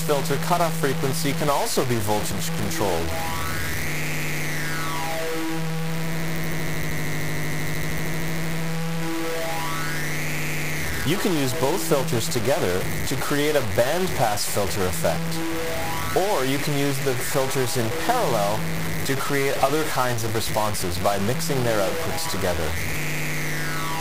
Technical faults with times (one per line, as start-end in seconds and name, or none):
0.00-24.00 mains buzz
0.00-24.00 low bit depth without dither